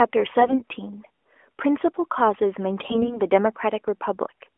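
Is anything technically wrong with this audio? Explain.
Yes. From 0.40 to 0.60 s and again from 2.82 to 3.20 s the speech turns hoarse, scratchy and gargly while holding roughly its pitch and level. These are AMR bit errors: on a weak link, flipped low-priority bits in the narrowband AMR mobile codec misplace excitation pulses and skew fine pitch, gain and spectral values. The first burst is harsher (roughly 15% of bits corrupted) and the second milder (around 7%).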